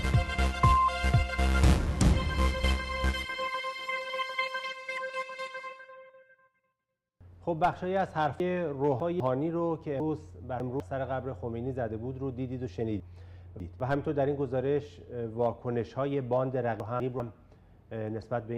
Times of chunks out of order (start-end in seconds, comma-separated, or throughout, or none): 8.40-9.20, 10.00-10.80, 13.00-13.80, 16.80-17.20